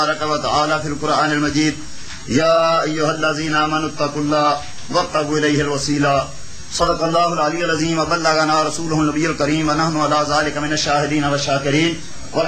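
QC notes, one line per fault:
Nothing to flag here, as there's no audible fault anywhere in the audio.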